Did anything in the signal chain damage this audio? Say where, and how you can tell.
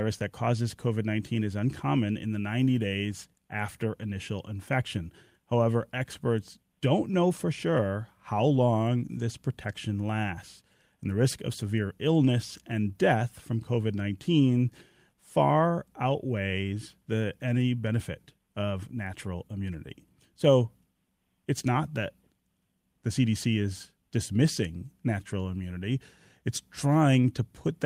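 No, none of the stages in this speech recording's signal chain left an audible mark on it.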